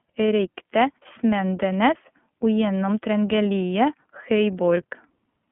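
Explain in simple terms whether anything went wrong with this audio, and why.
The speech went through the iLBC codec, a phone-call voice codec, for the whole clip. It cuts everything above about 3.4 kHz, so it sounds thin, and packing sound into separate 30 ms chunks leaves a plainly rough, slightly synthetic edge.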